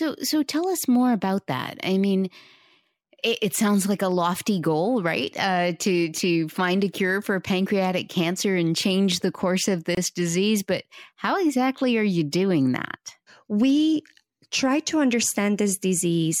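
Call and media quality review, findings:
Gap at a join of encoded pieces, 9.95 to 9.97 s: 24 ms dropout in continuous speech, edges smeared, speech resumes where it stopped. Suspect segment concatenation of 10 s encoded pieces, untrimmed encoder start delay and last-frame padding.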